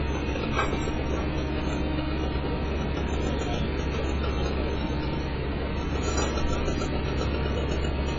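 AAC compression runs throughout the clip, from start to finish. Nothing reaches above 7.6 kHz, so the top of the sound is cut off cleanly and it comes across dull and closed-in. Sustained parts warble and smear, and bright, hissy detail turns fizzy and grainy. The likely cause is AAC-LC encoding at a very low bitrate, which fits something around 12 kbps. At that rate the encoder lowers its cut-off and starves or noise-fills the upper bands.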